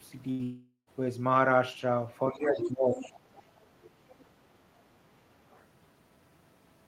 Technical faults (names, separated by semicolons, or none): burst of packet loss; long network dropout; other side's voice leaking through; speech suppressed in double talk